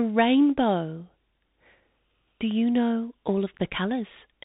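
From start to finish the speech goes through a Bluetooth CVSD headset codec, a one-bit up-or-down coder with a constantly adapting step, which fits a 64 kbps link. Nothing above 4 kHz survives, s sounds turn scratchy, and a grainy hiss sits underneath.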